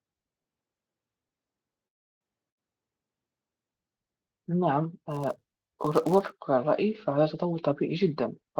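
From 1.87 to 2.24 s there is a call audio freeze. The speech stops for about 330 ms and that stretch is almost entirely silent. It then picks up exactly where it left off, so nothing is lost and everything after arrives about 334 ms late. The likely cause is delayed packets draining the jitter buffer.

At 2.50 to 2.59 s a burst of packet loss hits. Roughly 80 ms of speech never arrived. The receiver filled about 74 ms by extending and fading the last sound. Playback then jumps ahead past the missing part.

From 5.11 to 6.42 s a filter restarted on every block adds a 100 Hz buzz. Each block begins from a cleared state and leaves a small click. Those clicks repeat at the block rate and rise and fall with the speech level.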